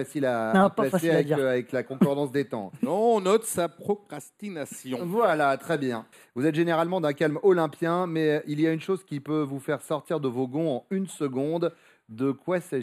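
One channel arrives about a tenth of a millisecond late, which fits a delay of a few samples, before the two are summed to mono. This channel delay causes comb filtering across the whole clip, with cancellations from around 5 kHz upward that leave the audio thin and phasey at the top.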